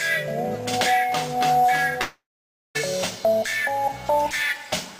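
At 2.01 s the audio breaks off, and what remains is a buzzy continuation of the last sound that fades, leaving about 0.55 s of silence before the sound resumes at 2.77 s with roughly 0.74 s gone, likely a long network dropout.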